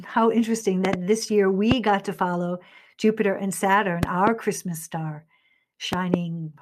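A sudden voltage pulse, likely from a plug, switch, static or driver glitch, reaches the signal and causes loud pops well above the speech, which continues underneath: a double pop at 0.85 to 0.96 s, a single pop at 1.71 to 1.74 s, and double pops at 4.03 to 4.29 s and 5.93 to 6.16 s.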